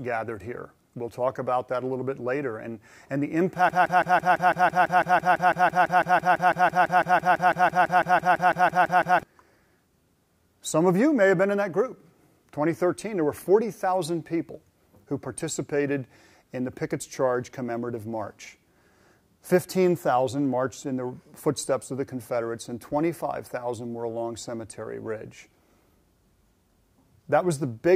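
From 3.69 s to 9.23 s the audio sticks in a broken-record loop, one fragment of about 0.17 s repeating exactly, back to back, 33 times. This likely comes from a stalled player or stream resending its last buffered piece, so the audio meant for that stretch is lost.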